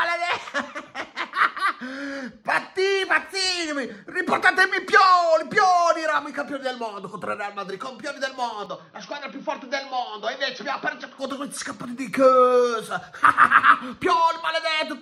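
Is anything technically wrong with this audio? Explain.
Yes. From 8.66 to 11.18 s it goes dull and roughly 5 dB quieter, with nothing above 6.1 kHz and its own background noise. That's likely the input switched to a poorer device, with no gap at the switch.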